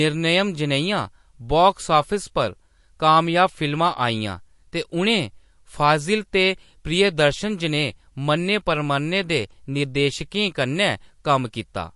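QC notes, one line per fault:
Throughout: MP3 compression. Nothing is left above 11.3 kHz, and the speech has a watery, swirling texture, with s sounds chirping and attacks smeared. This is likely a low-bitrate MP3 encode, fitting roughly 48 kbps, where the encoder cuts the treble and zeroes weak frequency lines that flicker between frames. A plain low-pass filter would remove the top end cleanly, without that shifting, bubbling texture in the remaining band.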